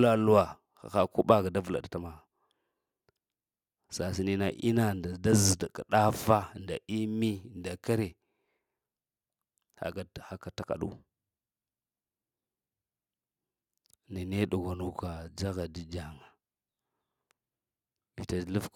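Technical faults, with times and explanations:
No technical faults are audible in this speech.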